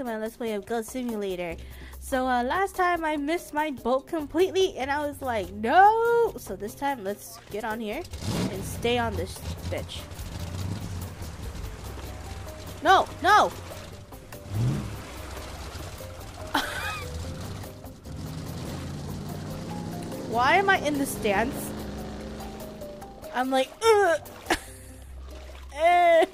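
Listening through the whole clip, nothing stood out as a technical problem at any point.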